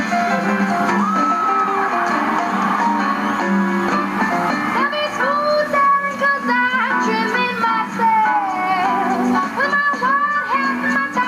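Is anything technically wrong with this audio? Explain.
Yes. Throughout, there is gain pumping: the background swells in the gaps and ducks by around 10 dB under each loud sound, likely from excessive gain driving a fast limiter. Unlike a noise gate, the background rises between sounds rather than cutting out.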